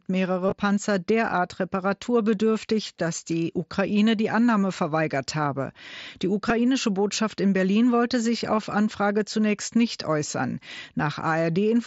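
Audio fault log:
0.46–0.52 s, concealed Bluetooth headset packet loss: about 45 ms lost, scattered over 60 ms, longest run near 22.5 ms. The receiver fills each gap by repeating the best-matching stretch of recent waveform, so the level holds with a brief buzzy tone and a small warble as real audio returns. Silence would mark a mute or dropout instead.
6.49 s, concealed Bluetooth headset packet loss: a single 7.5 ms loss, nearly hidden.
8.56 s, concealed Bluetooth headset packet loss: a 15 ms loss, a brief buzz under the light grain of the mSBC wideband link.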